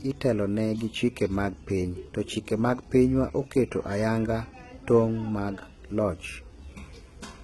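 From the first moment to the end, the speech carries heavy HE-AAC compression damage, likely from a very low bitrate, consistent with something near 16 kbps. Only the lower spectrum is coded directly. The treble is rebuilt by copying lower bands upward under a coarse envelope, so it sounds bright but synthetic, with harmonics misaligned across the crossover. Sibilants come out gritty and lispy, and nothing is present above 11.8 kHz.

Starting at 0.14 s and continuing to 7.43 s, clock slip clicks recur at a steady rate of roughly one every fifth of a second. Each is a single dropped or repeated sample, likely because two devices run on unsynchronised clocks differing by around 100 ppm. Each time the drift accumulates to a full sample, a faint tick results, heard most clearly on louder, sustained parts of the speech and absent during pauses.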